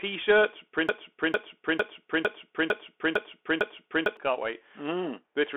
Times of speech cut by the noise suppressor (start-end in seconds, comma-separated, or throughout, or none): none